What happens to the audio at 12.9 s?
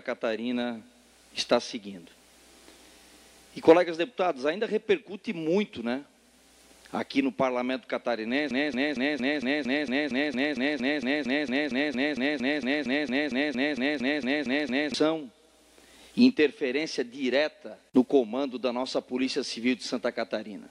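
At 12.9 s the audio is caught in a broken-record loop that runs from 8.51 to 14.94 s. A fragment of about 0.23 s repeats exactly, back to back, 28 times, giving a rapid stuttering pulse while the material that belonged there is lost. The likely cause is a stalled player, encoder or stream resending its last buffer. A waveform shows identical blocks tiled end to end, and a spectrogram shows the same short pattern stamped repeatedly at a steady rhythm.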